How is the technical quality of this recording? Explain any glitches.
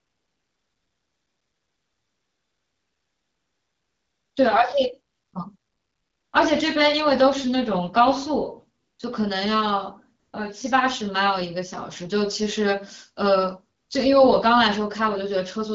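The recording has repeated AMR comfort noise gaps, heard over the light coloration of wideband phone coding. AMR comfort noise occurs at 0 to 4.35 s, 5.13 to 5.33 s, 5.57 to 6.33 s, 8.79 to 8.99 s, 10.19 to 10.33 s and 13.77 to 13.89 s. During these stretches no speech frames were sent, so the receiver generated a smooth, steady substitute hiss that switches in and out abruptly. On a spectrogram these spans appear as flat, featureless noise with sharp vertical edges.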